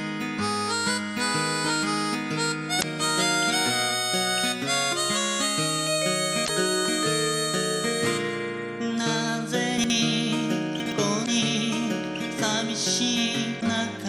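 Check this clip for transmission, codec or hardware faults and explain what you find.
Two kinds of fault are present: damaged data in the compressed stream at four points and chunks out of order at two points.

Damaged data in a compressed stream appears at 2.78–2.84 s, 6.44–6.50 s, 11.22–11.28 s and 13.57–13.63 s, each about 55 ms long. Corrupted bytes make the decoder misread frames and lose sync until it finds the next valid header, producing a brief chirp or blip.

Chunks out of order appear at 9.78–9.90 s and 10.80–10.92 s. In each case a 60 ms chunk plays one chunk late, swapped with its successor. Nothing is missing, but three hard joins per event produce a short jumbled moment.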